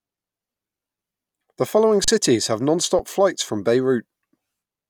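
At 2.04 to 2.08 s and again at 2.99 s, just before "flights from", an underrun with held sample freezes the waveform into a flat line for 35 and 6 ms. Speech drops out silently, then resumes where roughly 40 and 5 ms went missing.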